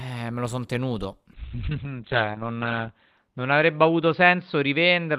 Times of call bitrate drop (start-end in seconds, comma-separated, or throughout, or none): 1.35-5.18